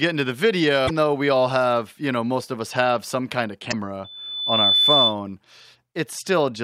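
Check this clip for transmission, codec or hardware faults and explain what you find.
Two kinds of fault turn up in this speech clip: damaged compressed data at two points, and a feedback squeal later on.

Damaged data in a compressed stream, at 0.85–0.90 s and 3.69–3.74 s: corrupted frames make the decoder lose sync and hunt for the next header, producing brief glitches.

Loudspeaker feedback squeal, from 4.04 to 5.16 s: the microphone picks up its own loudspeaker, so a 3.5 kHz tone builds over most of a second to about 5 dB above the speech.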